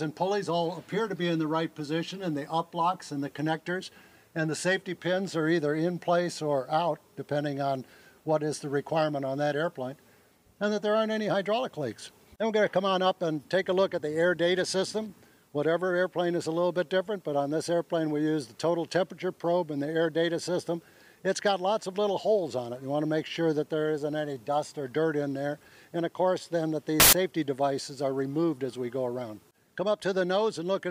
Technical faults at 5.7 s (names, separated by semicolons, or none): none